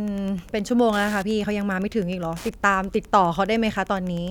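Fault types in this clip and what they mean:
Wi-Fi interference: a nearby Wi-Fi radio's beacon transmissions are picked up and rectified by the audio circuitry, producing a steady tick every 102.4 ms, close to ten per second, for the whole length of the speech at roughly 25 dB below it. On a spectrogram it shows as thin, evenly spaced vertical broadband lines across the entire clip. On the waveform it appears as small, regular spikes under the speech, plainest in the pauses.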